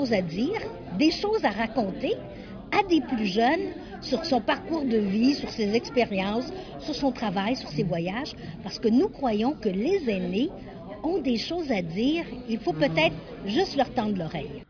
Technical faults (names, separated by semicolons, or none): none